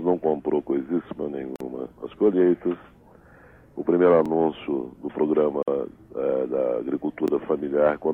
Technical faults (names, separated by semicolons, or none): overlapping chunks; gap at a join of encoded pieces